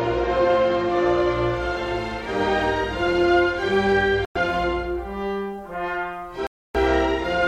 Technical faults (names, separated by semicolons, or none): Bluetooth stall